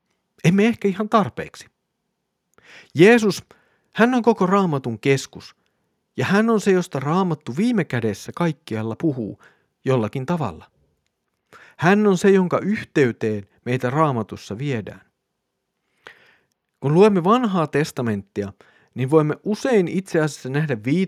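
A speech recording in which no technical fault can be heard anywhere in the signal.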